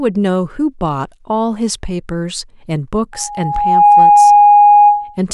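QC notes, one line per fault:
3.13–5.18 s loudspeaker feedback squeal: a mic–speaker loop runs away at 827 Hz, swelling within a second to about 10 dB over speech as a single tone.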